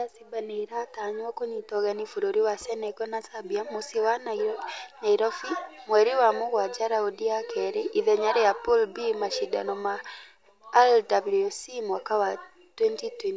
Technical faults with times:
none

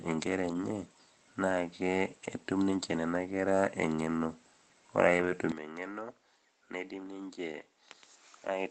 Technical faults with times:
0.45-0.63 lost packet rebuilt from error correction
2.23-2.25 lost packet rebuilt from error correction
5.17-5.31 lost packet rebuilt from error correction
5.52-8.71 input switched to a poorer device
7.03 lost packet rebuilt from error correction

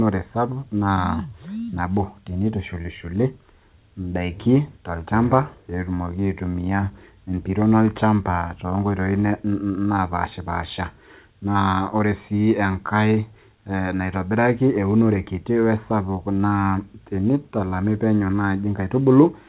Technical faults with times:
none

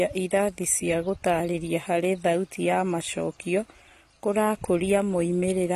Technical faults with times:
0.00-5.75 AAC compression

